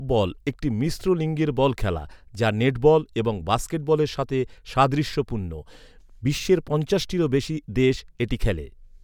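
No technical faults can be heard anywhere in the recording.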